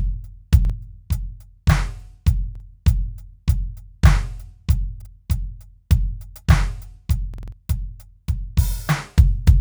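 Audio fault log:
0.65 s, 2.55 s and 5.02 s: repeated buffer. A roughly 46 ms slice of the music plays twice with a hard join, a quick stutter that fits a 2048-sample buffer arriving late.
7.34–7.52 s: repeated buffer. The same-sized slice loops four extra times, giving a longer stutter as new audio stalls, and about a fifth of a second of music goes missing.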